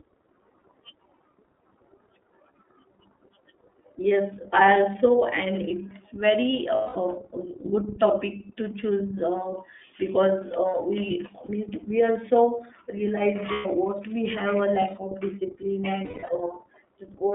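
Speech heard throughout through the iLBC codec, a narrowband VoIP coder. The line is confined to roughly 250 Hz to 3.5 kHz, so nothing above that reaches the ear, and the voice has a plainly audible rough, synthetic edge. Unlike a plain low-pass or a wideband codec at low bitrate, the coarseness comes from each frame's excitation being coded on its own. The sound fits iLBC's 30 ms, 13.33 kbps mode.

Lost iLBC frames interrupt it four times. The first runs from 6.75 to 6.97 s, after "also and it's very", and lasts about 210 ms. A brief 30 ms drop comes at 11.45 to 11.49 s, after "uh because uh we". Another runs from 13.52 to 13.66 s, about 120 ms. The last is spread over 16.04 to 16.30 s, after "of discipline", with its longest run near 200 ms. In each gap the decoder repeats the last pitch cycle blended with noise, so the gap sounds like a held, buzzy vowel rather than silence or a click. 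What separates these from concealment in codecs that carry state across frames is that the voice is right again almost at once afterward, with no smeared recovery.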